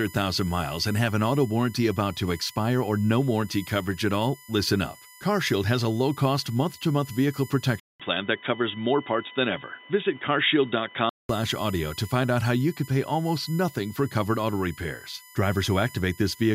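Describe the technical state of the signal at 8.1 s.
At 8.1 s the speech sits inside a stretch from 7.80 to 11.29 s where the input has likely switched to a poorer device. A 200 ms silence marks the switch, and then nothing comes through above 3.8 kHz. The speech turns dull and boxy at much the same level, over a new noise floor roughly 35 dB below it.

USB whine also runs through this moment, as through the whole clip. It is a fixed tone at 1 kHz and its multiples, strongest at 2 kHz, sitting roughly 20 dB below the speech. It comes from the bus's 1 ms frame activity drawing current that leaks into the audio path through power or ground.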